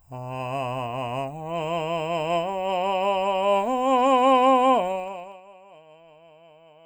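From 4.88 to 5.44 s the music drops by roughly 25 dB in 2 dB steps, about thirty a second. That zipper noise ticks audibly.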